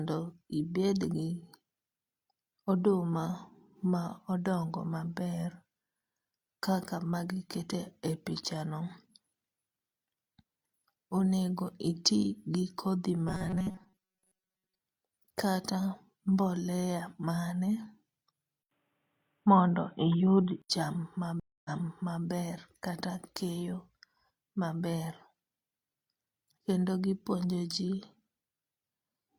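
From 13.28 to 14.78 s, just after "gi kodhi", the speech has robotic sound from repeated short buffers, likely from audio arriving too seldom. Most of the audio is replaced by repeats of a roughly 5 ms slice, forcing a metallic 188 Hz buzz.

At 18.63 s the input likely switched to a poorer device. An 80 ms silence is followed, until 20.70 s, by dull, boxy sound, a small level shift and faint new background noise.

At 21.40 s a stream reconnect causes a 252 ms silence. Playback then resumes about 0.6 s earlier, repeating material up to 22.25 s.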